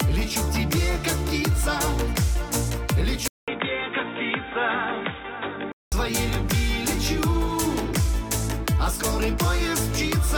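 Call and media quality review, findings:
Sound abruptly dull and boxy from 3.28 s to 5.92 s, nothing above 3.8 kHz, roughly 5 dB quieter, faint new noise floor, 200 ms gap at switch. Likely input switched to a poorer device, such as a headset call profile, narrowing the band.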